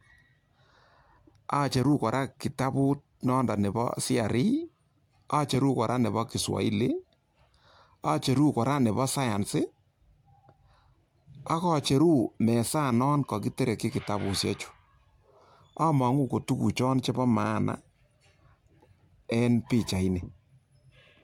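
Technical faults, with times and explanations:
No technical faults can be heard in this speech recording. There is nothing here that needs a time or an explanation.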